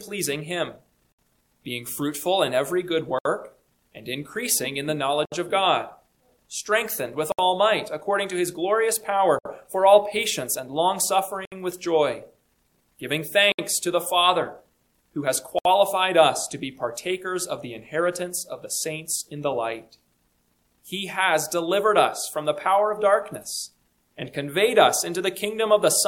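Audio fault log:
1.12, 3.19, 5.25, 7.32, 9.39, 11.45, 13.52 and 15.59 s: gap at a join of encoded pieces. A gap of about 65 to 67 ms cuts into continuous sound every 2 s, with smeared edges. Separately encoded pieces were joined untrimmed, keeping each encoder's start delay and padding.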